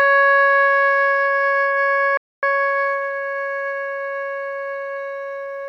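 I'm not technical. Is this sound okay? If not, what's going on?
No. The music has four problems.

At 2.17 s there is a playback stall: it goes silent for about a quarter of a second, until 2.43 s, then carries on. The likely cause is the player running short of data. This is one clear gap, not a chopping effect.

From 2.43 to 2.67 s comes a time-compressed catch-up: the music plays at double speed to make up lost ground, but the pitch stays normal, so it sounds rushed rather than squeaky like a sped-up tape.

Between 2.94 and 4.33 s there is repeated stalling (stutter): fourteen tiny hiccups, none longer than about a fiftieth of a second, each filled by stretching the last sound. Nothing is lost, but the music drags and catches instead of falling silent.

From 4.83 to 5.39 s a jitter buffer slow-down makes the music play at about 87% speed to rebuild a reserve. It sounds drawn out at the same pitch.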